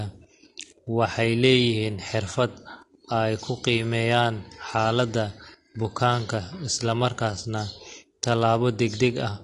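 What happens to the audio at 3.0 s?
Nothing new starts at 3.0 s. The speech there carries the same AAC compression artefacts heard across the whole clip: nothing above 11.2 kHz, a dull smeared top end, and a fizzy, warbly texture on sibilants, likely from low-bitrate AAC-LC, which fits roughly 32 kbps.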